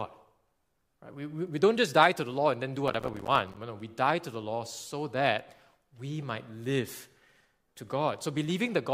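Processor overload crackle runs from 2.88 to 3.57 s in this speech clip, starting right after "law and then do". For about 0.7 s the audio is broken by a rapid run of tiny silent gaps with hard edges, heard as gritty tearing over the sound. The processing could not keep up, and dozens of short buffers, each around 5 ms, missed their deadlines and dropped to silence. The crackle ends once the load eases.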